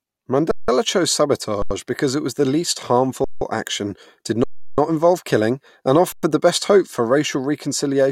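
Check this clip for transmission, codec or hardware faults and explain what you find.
The clip has a hardware playback fault: five underruns with held sample, at 0.51–0.68 s, 1.62–1.71 s, 3.24–3.41 s (after "it was the least", before "action did"), 4.44–4.78 s (before "involve killing and") and 6.12–6.23 s (before "the best hope for"). Each pause runs 85 to 340 ms. The output buffer emptied, and the converter froze on its last value, so the waveform sits flat, usually off zero, and the sound stops almost without a click. Unlike a dropout to silence or a packet loss, nothing is skipped. Speech resumes exactly where it halted, so each gap ends softly rather than with a jump.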